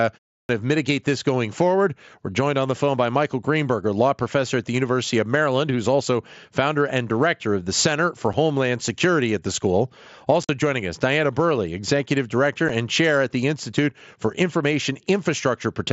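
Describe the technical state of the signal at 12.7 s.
At 12.69 s there's a brief hole from unconcealed Bluetooth headset packet loss: about 7.5 ms of voice never arrived, leaving a silent gap with hard edges.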